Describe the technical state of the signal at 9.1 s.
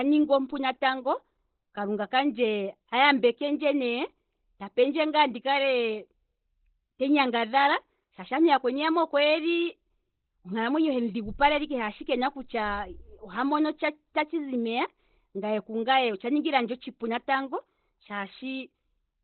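At 9.1 s the speech sounds muffled and hoarse, with nothing above about 4.2 kHz throughout the clip. The likely cause is heavy Opus compression in its narrowband speech (SILK) mode, consistent with a bitrate near 12 kbps.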